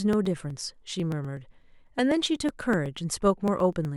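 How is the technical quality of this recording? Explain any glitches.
The recording is marred by periodic USB or driver dropouts. From 0.13 to 3.85 s, a bus or driver stall every 0.124 s skips about a millisecond, putting steady ticks through the speech.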